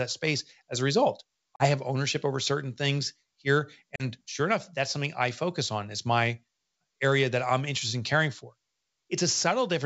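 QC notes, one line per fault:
1.56–1.68 s and 3.96–4.05 s, packet loss on an ADPCM call: After "space as a result" and after "over certain things here", the sound drops into a hard-edged 40 ms hole, which points to a couple of lost packets. The gap is filled with silence. The decoder's predictor and step size then no longer match the sender's. So the sound resumes with brief, slight distortion, before "have ownership over certain" and "sure enough that's something". It settles within tens of milliseconds.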